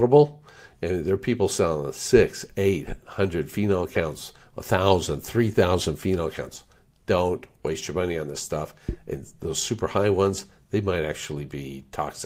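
No technical faults turn up anywhere in this audio, so there is nothing to describe in time order.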